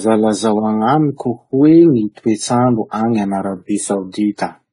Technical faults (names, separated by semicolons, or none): transcoding between lossy codecs